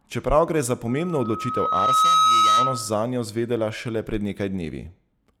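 Just after "gre za", at 0.88 s, a loudspeaker feedback squeal starts: a 1.3 kHz tone swelling over roughly a second until it sits about 10 dB above the speech. The mic's hearing its own speaker and the loop runs away, lasting until 3.03 s, right before "zvedela šele".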